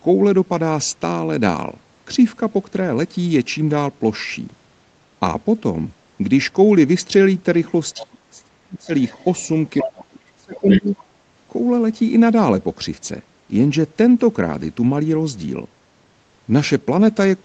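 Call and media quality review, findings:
Other side's voice leaking through: a second voice at 7.97–8.06 s (brief scrap, about 20 dB under), 9.03–9.48 s (faint, about 30 dB down) and 10.55–11.04 s (fairly prominent, about 10 dB under). Likely loudspeaker echo the canceller didn't fully remove from the mic.

Speech suppressed in double talk: main speech ducks hard at 7.98–8.91 s (around 40 dB at worst) and 9.81–10.94 s (around 35 dB), roughly a second each, overlapping the leak bursts. Likely the echo canceller clamping down while both sides talk at once.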